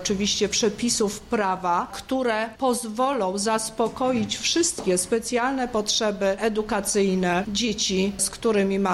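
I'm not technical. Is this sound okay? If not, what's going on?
No. There are two sharp clicks, at 1.57 and 3.13 seconds, most likely from dropped samples: a tiny sliver of the sound, a fraction of a millisecond, went missing, so the sound jumps abruptly. Unlike a dropout, no audible silence or gap appears, just a click.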